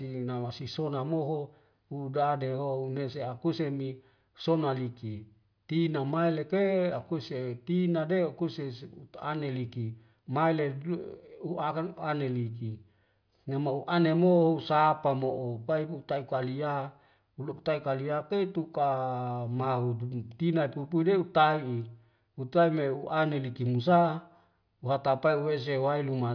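No audible technical faults.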